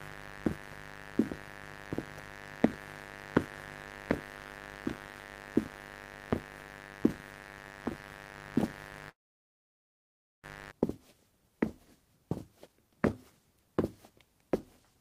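A steady, raspy buzz sits under the sound from 0.0 s to about 10.72 s, roughly 15 dB below it. This is mains buzz: sharp switching spikes twice per 50 Hz cycle, from a dimmer, rectifier or poor shielding, spread harmonics of 50 Hz well into the kilohertz range.

At 9.09 s the audio breaks off. A brief fading tail gives way to near silence lasting about 1.3 s, and the sound resumes at 10.45 s with roughly 1.34 s absent. This is likely a long network dropout, where the receiver smeared out the last received sound before falling silent.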